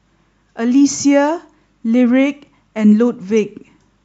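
DAB burbling appears from 3.31 to 3.41 s, near the end of the speech. Bit errors from weak reception slip past error correction into the MP2 data, corrupting samples so short blips of noise appear in single sub-bands, a brief disturbance over a few frames.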